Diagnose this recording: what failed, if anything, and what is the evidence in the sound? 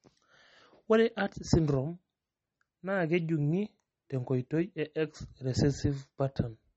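The failure sits at the codec stage, most likely MP3 compression, and it runs through the whole speech clip. Nothing is left above 8.1 kHz, a hard treble cut an encoder short of bits imposes. Unlike a simple band limit, the damage here is plainly audible, with a watery, swirling texture where weak spectral lines drop in and out between frames. That points to a low bitrate in the region of 33 kbps.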